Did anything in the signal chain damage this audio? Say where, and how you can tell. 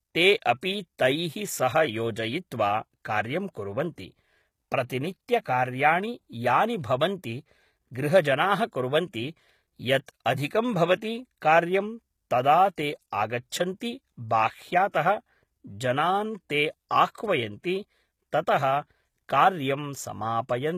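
Yes. Throughout the speech, the treble stays bright but s sounds turn gritty and lispy, which is likely HE-AAC compression at the codec stage, around 20 kbps, rather than simple filtering.

Pre-echo occurs at 10.06 to 10.08 s and 14.90 to 14.94 s. A short hiss precedes the attacks because block-wide codec noise spreads ahead of each one, whereas clicks land on the transient itself.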